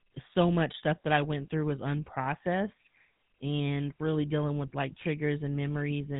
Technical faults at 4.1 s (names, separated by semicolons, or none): GSM full-rate codec